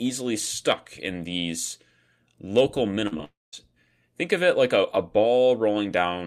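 Short concealed packet loss occurs twice in quick succession, from 3.07 to 3.13 s and from 3.17 to 3.20 s. About 40 ms and then 20 ms of speech failed to reach the decoder on time. Each time, the receiver bridged the gap by extending the preceding sound and then blending back into the real signal. The result is a brief smeared, wobbly patch in the speech rather than an outright break.

A long network dropout follows almost immediately, from 3.24 to 3.54 s. The speech turns into a synthetic continuation that fades away, leaving roughly 0.19 s of silence before the audio returns further on, with the intervening material simply missing. This is most likely an outage in which nothing arrived for about 0.28 s, so the concealment ran out and that portion was never played.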